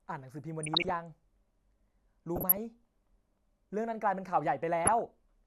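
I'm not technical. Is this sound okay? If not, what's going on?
No, there are three short bursts of DAB burbling, at 0.63 to 0.91, 2.36 to 2.57 and 4.85 to 5.06 seconds. Weak digital radio reception let a few corrupted bits through, so slices of the speech briefly burble.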